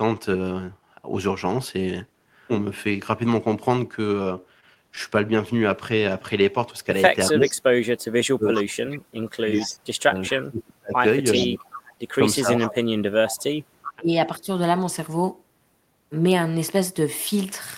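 Between 4.23 and 4.99 s, scattered short gaps appear: about four tiny holes, none longer than roughly 20 ms, which the receiver papered over by extending the preceding sound. They come across as ticks and smears, with no repeated delayed copy, which separates them from echo.

From 7.30 to 14.47 s the speech is suppressed in double talk. The near talker's level drops in pieces, at worst by about 40 dB, for roughly five seconds in total. The likely cause is an echo canceller that could not separate that talker from loudspeaker echo while both sides spoke, so it turned everything down. Unlike packet gaps, these dips are long and track the overlap.

Overlapping that stretch there is echo leak at 7.27–7.51, 8.54–8.61, 9.61–9.67, 11.33–11.93 and 13.28–13.93 s. A copy of speech returns 382 ms late, between about 15 dB and 5 dB below the speech, loudest around 11.3 s. This is likely residual loudspeaker pickup that the canceller missed. 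The fixed delay marks it as echo rather than concealment smear.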